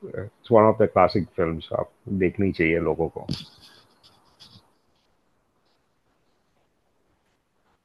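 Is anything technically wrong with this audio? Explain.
No, nothing technically wrong.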